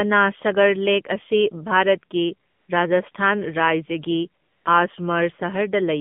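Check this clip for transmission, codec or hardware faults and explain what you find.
Two faults are present: narrowband mobile coding for the whole clip and three comfort-noise gaps.

AMR narrowband mobile codec, throughout: the speech passes through an AMR-NB channel limited to roughly 150 Hz to 3.5 kHz, and the plainly audible buzzy, synthetic coding texture fits a low mode near 7.4 kbps. The voice sounds muffled and artificial.

AMR comfort noise, at 2.50 to 2.68 s, 3.12 to 3.14 s and 4.42 to 4.66 s: the sender judged these moments silent and stopped sending speech frames, so the receiver generated synthetic noise instead. The real background gives way to smooth, steady hiss that switches in and out.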